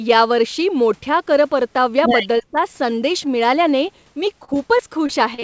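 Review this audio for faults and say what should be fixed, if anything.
From 2.41 to 2.56 s the speech dips sharply, by about 25 dB at its deepest, with roughly a tenth of a second affected. Speech suppressed in double talk is the likely cause: the echo canceller mistook overlapping far-end sound for echo and attenuated the talker. A brief dip with the talker's sound intact on either side distinguishes it from packet loss. Tuning the canceller's double-talk detection would prevent this.

From 4.45 s to the end, repeated packet loss gives a choppy, robotic texture. The sound points to about five short holes, the longest 33 ms, totalling about 120 ms, or 12% of that stretch. Each hole is patched by extending the preceding sound. The repeated choppy patching distinguishes this from a single clean dropout. Adding forward error correction and a more adaptive jitter buffer would prevent this.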